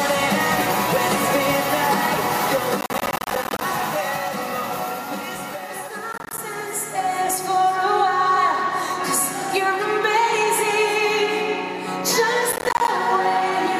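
Processor overload crackle hits the audio at 2.81–3.62 s, 6.13–6.38 s and 12.52–12.88 s: missed deadlines leave rapid silent gaps, which fits buffers of roughly 10 ms.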